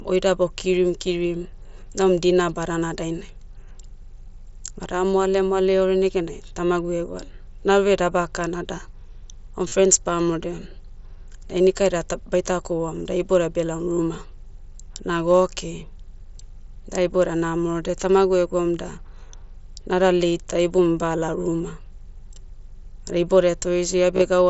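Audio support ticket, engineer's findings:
Concealed Bluetooth headset packet loss, 9.68–9.72 s and 24.15–24.22 s, about 37.5 ms replaced each time; the second is scattered over 60 ms, longest run 15 ms. Headset link dropping packets, gaps filled by repeating best-matching recent waveform. Waveform: short periodic copies. Spectrogram: held flat partials, slight warble at recovery.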